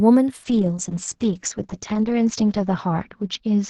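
From 0.45 s to the end, a call bitrate drop degrades the speech. The encoder was starved of bits, consistent with a fall from about 64 to 8 kbps. Detail above 8 kHz disappears. The sound turns coarse and muffled, worst for about 1.5 s.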